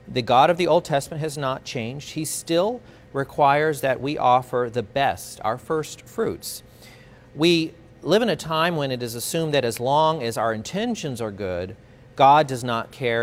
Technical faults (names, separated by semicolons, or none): none